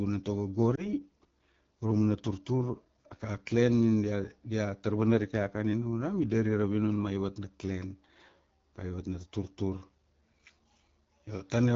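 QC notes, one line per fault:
throughout: AMR wideband (HD Voice) codec. The speech has a rough, raspy edge. That roughness points to one of the codec's lowest modes, around 8.85 kbit/s, where the pulse excitation and vocal tract model are too coarse to carry fine detail. On a spectrogram the energy stops sharply near 7 kHz, and the band from 6.4 to 7 kHz looks like smooth noise with no harmonic structure.
0.75–0.89 s: lost AMR speech frames. There is a brief dip and warble in the speech. When a corrupted frame failed, the decoder repeated the previous pitch and vocal tract settings at reduced gain. The speech then came back weak and rough. The effect fits a single lost 20 ms frame. On the waveform, the envelope sags briefly and then recovers. On the spectrogram, the harmonics smear flat for a moment instead of following the pitch contour.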